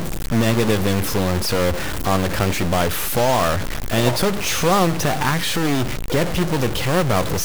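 Harsh, buzzy distortion runs throughout. Pauses fill with noise too. A stuck bit, likely from a broken line or converter, adds steps of about -20 dBFS.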